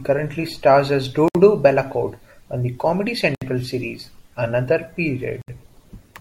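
At 1.28 to 1.35 s, just after "stars as", the speech drops into silence for about 66 ms. It happens again at 3.35 to 3.42 s and 5.42 to 5.48 s, every 2.0 s. These are gaps at joins of encoded pieces. Untrimmed encoder delay and end padding leave abrupt, slightly smeared holes before the speech resumes where it stopped.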